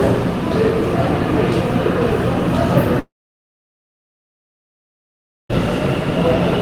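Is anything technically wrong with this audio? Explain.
Yes. From 2.99 s to 5.51 s there is a long network dropout. For about 2.5 s no new audio is heard. The last sound is briefly extended into a short, fading buzz lasting under a tenth of a second, and then the signal goes to silence for roughly 2.4 s. The audio resumes at 5.51 s, with that section missing rather than delayed. The likely cause is a stall in packet delivery, during which the receiver's concealment stretched the final fragment and then muted.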